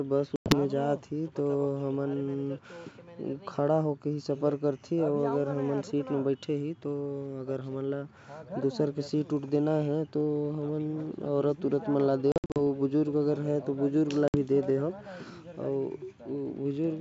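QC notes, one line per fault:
0.36–0.54 s, 12.32–12.57 s, 14.28–14.36 s: packet loss on an ADPCM call. Hard-edged silent gaps of 100 ms, 180 ms scattered over 240 ms, and 60 ms. Each return carries brief slight distortion while the decoder's predictor and step size resynchronise.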